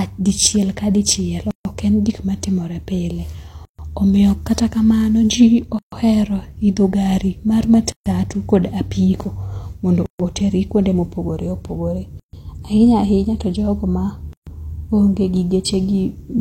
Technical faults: gap at a join of encoded pieces

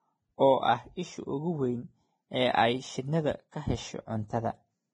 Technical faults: Vorbis compression

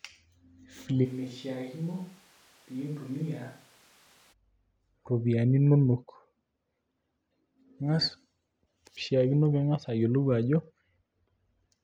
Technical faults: switch to a distant microphone

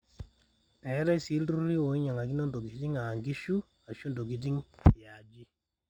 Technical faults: imaging from linear upsampling

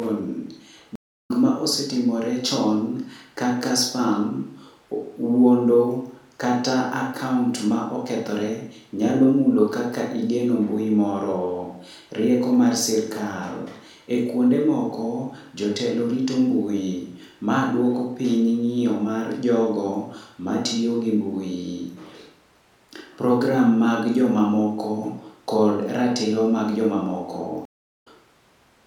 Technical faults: stream reconnect

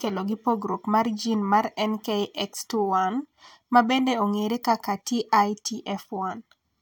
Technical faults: none

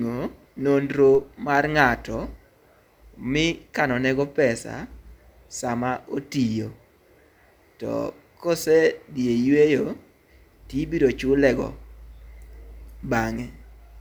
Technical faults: DC step

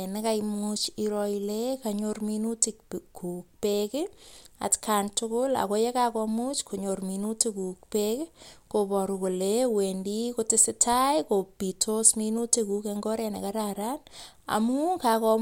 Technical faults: none

